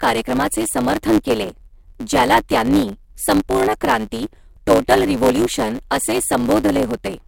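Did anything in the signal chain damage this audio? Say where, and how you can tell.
Yes. A block size mismatch (truncated) at the driver or buffer stage runs through the whole speech clip: a buzz at 109 Hz and delivery about 1.09 times too fast. Each block is written longer than the next stage reads, and the excess is discarded.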